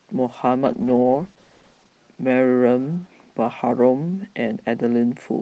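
From 0.68 to 1.97 s, a call bitrate drop starves the encoder, falling to what sounds like 13 kbps, and the speech turns coarse and rough.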